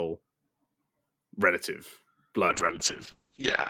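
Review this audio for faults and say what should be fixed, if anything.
There's a call bitrate drop starting at 2.48 s and running to the end of the clip. The bandwidth estimate collapsed, so the encoder was pushed down to a much lower rate, and the sound fits a fall from around 40 kbps to about 7 kbps. At that rate Opus codes everything far more coarsely and pulls the top end down from 20 kHz to 8 kHz. For the last 1.22 s the speech goes muffled and rough, with a watery edge.

To prevent it, give the bandwidth estimator a floor or smoother ramp-down so a brief dip doesn't starve the encoder.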